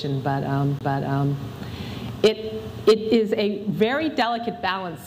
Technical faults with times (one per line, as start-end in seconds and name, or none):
0.79-0.81 CD skip